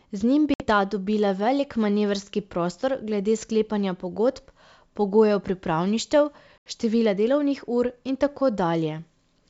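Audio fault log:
0.54 s and 6.58 s, packet loss on an ADPCM call: about 60 ms, then 80 ms, of lost packets (roughly three and four) are filled with silence, and the G.722 decoder's predictor and step size drift from the sender's. Each hard-edged gap ends with speech returning with brief distortion, after "njim bi" and after "sklepanja pogodb pogojev pripravništev".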